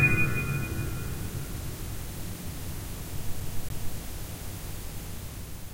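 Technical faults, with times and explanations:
3.40–3.97 s, CD stuck on one turn: a 0.28 s slice repeats twice, with a brief mute at each jump as the laser falls back a track.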